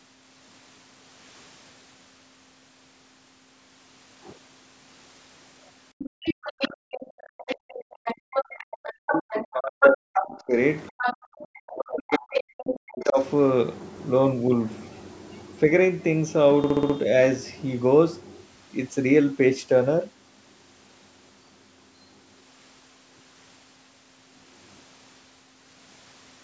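From 5.98 to 10.26 s a second voice, the other side's voice leaking through, sits only a little below the talker. It most likely comes from loudspeaker echo that the canceller failed to remove. It returns from 10.88 to 11.44 s and from 12.12 to 12.71 s.

At 6.1 to 6.23 s the room tone drops by about 40 dB for a brief moment and then comes back. This is background gated by the echo canceller, which clamped the microphone while the loudspeaker played. It differs from a dropout because only the background dips, and it recovers cleanly.

From 7.03 to 10.57 s, and again from 11.42 to 13.2 s, the talker's own voice dips very deeply, for around three seconds and then about two seconds in total. This is speech suppressed in double talk, likely because both sides spoke at once and the canceller turned both down. Unlike gating, the talker's speech itself is what disappears.

From 16.64 to 16.96 s one 64 ms slice repeats exactly five times at 15.6 Hz, which gives a machine-gun stutter. 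This is a system hang loop, where the hardware kept replaying its ring buffer, which fits a 1024-sample buffer. Unlike a codec glitch, the repeats are identical. Above it all, the call's microphone processing leaves nothing above 8 kHz.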